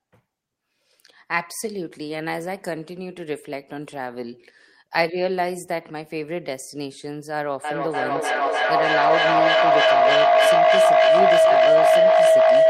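From 7.64 s to the end, a feedback howl builds as the loudspeaker-microphone loop gains level each pass. A spectrogram shows a bright band near 700 Hz, pulsing about three times a second, up to about 11 dB above the speech.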